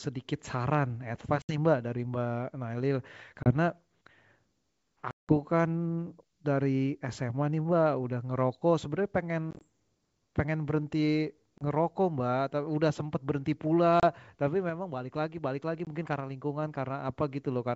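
Packet loss on an ADPCM call breaks the speech seven times. Gaps fall at 1.42–1.58 s (70 ms lost), 3.43–3.52 s (30 ms), 5.11–5.33 s (180 ms, the longest), 9.51–9.64 s (60 ms scattered in runs of up to 20 ms), 11.58–11.63 s, 14.00–14.04 s and 15.85–15.88 s. Each is a hard-edged silence. The decoder's predictor and step size then disagree with the sender's. Speech returns slightly distorted, then settles within tens of milliseconds.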